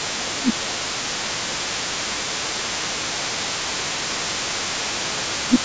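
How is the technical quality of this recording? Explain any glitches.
The recording has two related call-path faults that run through the speech.

The other side's voice leaking through is present across the whole clip, sitting roughly 15 dB below the main talker. The far-end audio from a loudspeaker was likely not fully cancelled at the microphone, so a fainter second voice stays audible underneath.

Speech suppressed in double talk occurs at 0.08–0.84 s, 1.0–1.65 s, 2.04–2.18 s, 2.54–5.14 s and 5.46–5.55 s, with the longest stretch near 2.5–5.1 s. The main voice dips by roughly 15 dB, likely because the echo canceller turned down both voices while they overlapped. The talker dips, loses high end or cuts out in pieces during those spans. The band stops at 8 kHz, which is normal for call microphone processing.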